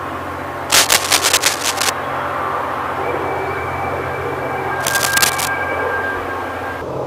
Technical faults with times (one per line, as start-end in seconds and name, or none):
0.70-1.89 cable scratch noise
4.80-5.48 cable scratch noise